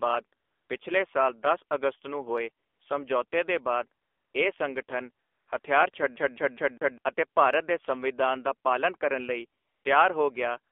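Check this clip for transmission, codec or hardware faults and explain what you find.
Three faults are present: a narrowband mobile codec throughout, one brief comfort-noise insertion, and a skipping-CD stutter.

AMR narrowband mobile codec, whole clip: the speech is confined to roughly 300 Hz to 3.5 kHz and sounds buzzy and synthetic, pointing to a low AMR-NB mode around 7.4 kbps. Its vocal-tract model with sparse pulse excitation gives this buzz, unlike the watery smear of MP3-style transform codecs.

AMR comfort noise, at 5.92 s: for one 20 ms frame no speech was sent, and the receiver substituted smooth synthetic noise generated from a coarse level-and-spectrum description. Because that gap is filled with noise rather than going dead, it differs from an ordinary dropout.

CD stuck on one turn, 6.16 to 6.98 s: the same 0.20 s segment plays four times, with a short mute at each jump, before the speech continues with "ਅਤੇ ਭਾਰਤ ਦੇ ਸੰਵਿਧਾਨ". 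The laser keeps jumping back one track, producing a rapid stutter with a fixed length and even spacing, unlike irregular packet-loss repeats.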